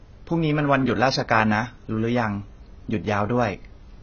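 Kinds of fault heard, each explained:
AAC compression: the speech sounds dull and smeared, with a fizzy, watery edge on sibilants and heavy damage throughout, likely from AAC-LC coding at what sounds like about 16 kbps. A spectrogram shows nothing above 6.5 kHz.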